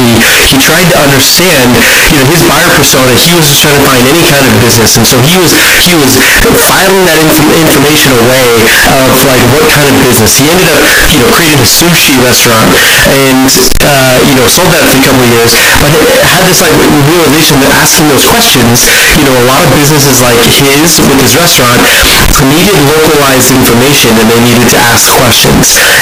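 From the first moment to the end, the speech is buried under a constant, very loud, harsh distortion, and the pauses roar as loudly as the talking. That points to a signed and unsigned mix-up in the 16-bit samples, likely a wrong sample-format setting: with the top bit flipped, every small swing around zero lands at the opposite extreme. Ordinary clipping only flattens the loudest peaks, but here the quiet passages are wrecked just as badly.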